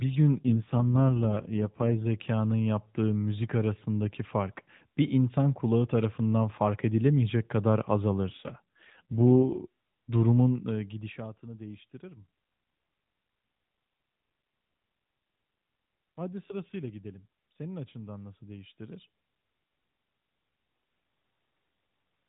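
From 0.36 to 2.06 s, ending just before "yaptığı müzik arasındaki fark", and again from 8.30 to 9.58 s, between "tarafından fark edilemeyecek kadar" and "durumun eee gidişatını değiştirir", the voice turns buzzy and synthetic with no gap and no change in bandwidth. These are AMR rate drops. The roughness fits the mobile codec being pushed from 12.2 to 4.75 kbps, leaving fewer bits to describe the voice.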